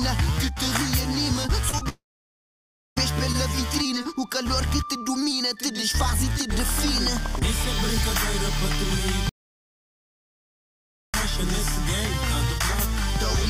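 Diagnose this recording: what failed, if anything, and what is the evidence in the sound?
Short concealed packet loss at 1.69–1.74 s and again at 1.78–1.83 s, a network-stage fault. Each sounds like a brief smear or wobble rather than a clean gap. Packets carrying about 40 ms and then about 20 ms of audio arrived too late for the decoder. The receiver covered the holes by extending the preceding sound, for about 31 ms and 24 ms, and then crossfaded back into the real signal.

Long network dropout from 1.89 s to 2.98 s, following straight on from those two glitches. The continued sound fades quickly, and most of the stretch, close to a second, is silence. The likely cause is a stall in packet delivery: roughly 1.08 s of audio never arrived, and the concealment could only hold for a moment before giving up. When the audio resumes at 2.98 s, the missing portion is simply gone.

Audio dropout to silence from 9.29 s to 11.14 s, about 1.84 s long. 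The sound cuts off mid-flow into silence with no room tone or noise floor. There is no fading tail, which separates it from the earlier network dropout. The likely cause is on the capture side, at the device, driver or input link, where the signal was lost while the recorder kept writing silence. Whatever occurred in that interval is unrecoverable.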